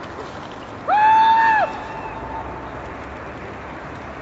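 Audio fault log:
Nothing to log here, just sound that's come through ordinary call processing, with nothing above 8 kHz, which fits a call codec running in wideband mode.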